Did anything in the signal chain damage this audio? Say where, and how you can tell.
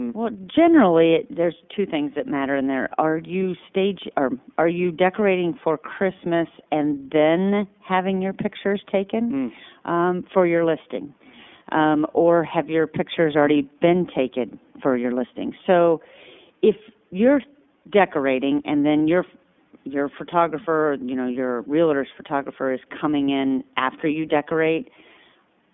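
Yes. The speech sounds boxed-in and plainly buzzy throughout, with a rough, synthetic edge. The band stops sharply near 3.5 kHz and thins below about 150 Hz, while the call microphone processing ahead of it only trims the lowest bass, which is normal. The damage comes at the codec stage. iLBC narrowband coding rebuilds each frame's excitation independently, consistent with 30 ms frames at the 13.33 kbps mode, which causes the plainly audible roughness.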